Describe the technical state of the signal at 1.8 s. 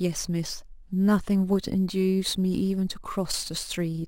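At 1.8 s the speech carries crude rate conversion, present across the whole clip rather than at this moment alone. The sound points to a change from 32 kHz up to 44.1 kHz done by simply repeating the nearest sample, without filtering. The stepped waveform leaves an error only roughly 20 dB under the speech, heard as gritty, inharmonic fizz riding on loud and bright sounds. Unlike steady hiss or dither noise, it rises and falls with the speech itself.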